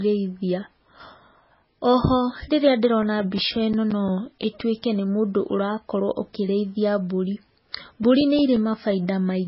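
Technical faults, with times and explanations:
Throughout, MP3 compression, likely at a very low bitrate: the treble is cut off at about 5.6 kHz, and sparse frequency bands flicker on and off between frames, giving the speech a heavily watery, swirly texture with chirpy s sounds and smeared attacks, which fits roughly 16 kbps.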